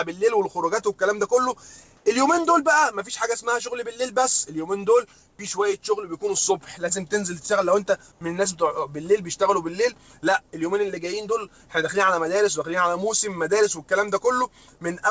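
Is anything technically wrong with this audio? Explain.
Yes. Comfort noise in place of the background occurs three times, each lasting 90 ms: 1.97 to 2.06 s, 5.30 to 5.39 s, and 8.12 to 8.21 s. The quiet background, about 40 dB below the loud parts, turns briefly smooth and featureless, then the real background returns. The first patch matches the surrounding level. The other two are about 2 dB quieter. The likely cause is discontinuous transmission, with the receiver generating synthetic noise during pauses. Over the call link, which has no content above 8 kHz, consistent with a wideband codec, these swaps are audible as short flat gaps in the background texture.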